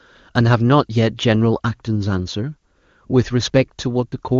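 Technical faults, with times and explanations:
No technical faults can be heard in the speech. It has passed through the AMR wideband (HD Voice) codec at its highest rate of 23.85 kbit/s, where any coding damage is faint at most.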